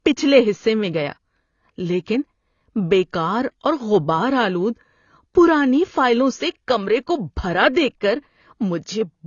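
Throughout, the speech sounds dull and smeared, with plainly audible codec damage and nothing above 6.9 kHz. The likely cause is AAC compression at roughly 24 kbps.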